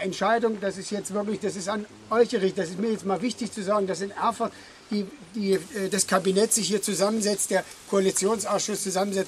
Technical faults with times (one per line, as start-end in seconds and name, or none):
5.52-9.27 pre-emphasis left on